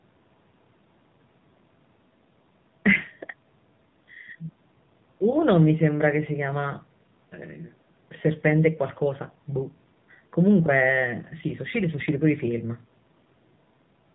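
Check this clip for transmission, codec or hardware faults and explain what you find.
One fault runs through the whole recording: the AMR narrowband mobile codec, with plainly audible damage.

From start to finish the speech is cut off at 4 kHz, because AMR-NB samples at 8 kHz and rebuilds the voice from a vocal-tract model excited by a few pulses in each 5 ms subframe. The buzzy, synthetic edge on the voice points to a low mode, around 7.4 kbps. That coded buzz is what separates it from a simple low-pass filter, which would leave a muffled but natural voice. The bass roll-off from the call's microphone processing is normal.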